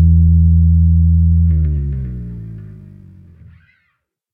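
No technical faults can be heard in this sound.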